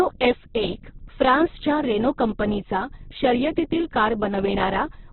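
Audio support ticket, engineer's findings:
Encoder starved of bits, likely Opus compression at a very low rate, consistent with about 8 kbps. Narrowband throughout, nothing above 4.1 kHz, so speech muffled. Music-mode band filling makes voiced tones grainy, rough and noisy. Heavy codec damage across the whole clip.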